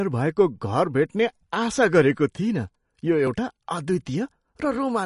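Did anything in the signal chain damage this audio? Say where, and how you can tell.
Yes, at the codec: throughout, the speech stops dead at 10.5 kHz and sounds watery, which points to MP3 compression likely near 40 kbps cutting treble and dropping weak lines.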